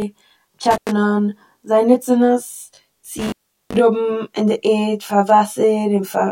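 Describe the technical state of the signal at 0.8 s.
A loose contact in the signal path opens between 0.71 and 0.89 s. This intermittent contact drops the speech out for about 113 ms, with crackle at each edge and faint hiss audible while the line is broken.

Underneath, one channel arrives roughly 20 ms late and the two are summed to mono. This channel delay produces comb filtering, cancelling evenly spaced frequencies from around 30 Hz upward, so the speech sounds rough and slightly doubled.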